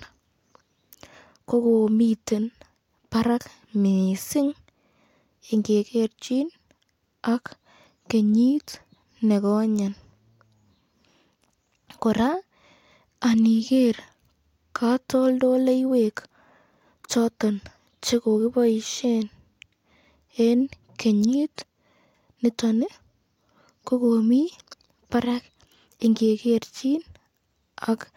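No technical faults can be heard anywhere in the recording.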